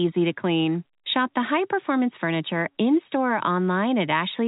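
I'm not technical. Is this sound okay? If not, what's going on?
Yes, no faults: it's ordinary telephone-grade speech, with the G.711 telephone coding cutting off everything above about 3.8 kHz as a normal phone line does.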